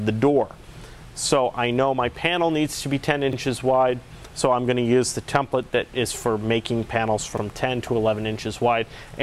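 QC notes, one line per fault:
3.33–3.38 s and 7.38–7.42 s, overlapping chunks: each 4 s chunk starts 44 ms early, so that sliver replays at the join, giving a quick stutter.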